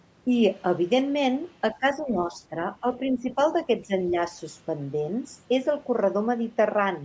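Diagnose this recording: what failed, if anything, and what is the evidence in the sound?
Speech suppressed in double talk at 1.75–2.56, 3.15–3.38, 3.87–3.93 and 4.11–4.16 s: in the call processing stage, speech dips by roughly 5 to 15 dB, likely an echo canceller turning down its own talker while the far side also spoke.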